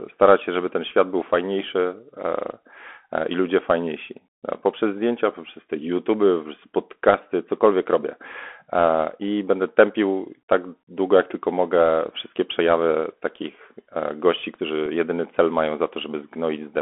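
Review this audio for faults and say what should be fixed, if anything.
The whole recording carries the Bluetooth CVSD headset codec. The sound is confined to roughly 250 Hz to 3.4 kHz, which fits a 64 kbps CVSD link. Its one-bit step tracking can't follow fast rises. Sibilants turn scratchy, and a granular hiss sits underneath throughout. Prevent it by recording through a wideband (mSBC/LC3) headset mode or a wired microphone.

At 14.86 s there is one Bluetooth headset packet repeated, between "przejawy takich gości którzy" and "jedyny cel mają". A single 3.8 ms packet was lost, and the previous packet's bits were decoded again. This leaves a small tick rather than a buzz. Prevent it by keeping the headset close to the phone, away from radio interference.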